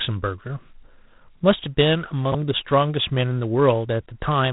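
From the start, the speech is carried by G.726 ADPCM at 24 kbit/s. Each sample is coded as a few bits of difference from an adaptive prediction, and at this rate the quantisation noise is plainly audible. It comes through as a harsh, rasping hiss that rises and falls with the speech level. The band is also capped, with nothing passing above about 3.8 kHz, so the top end sounds dull and telephone-like.

Between 2.25 s and 2.35 s there is a brief garbled moment caused by chunks out of order. One chunk of about 23 ms arrived or was written three chunks late, so it plays after material that should have followed it. No audio is lost. The sequence is scrambled, though, with three hard joins at the displaced boundaries across that short, jumbled stretch.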